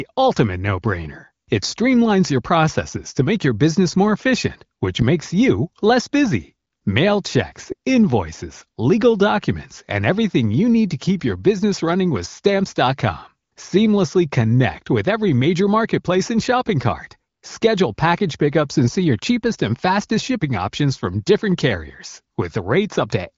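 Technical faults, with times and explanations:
No technical faults can be heard in this speech. It has the band-limited sound of the AMR wideband (HD Voice) codec, with nothing above about 7.4 kHz, and its clarity fits one of the codec's higher rates, such as 18.25 kbit/s.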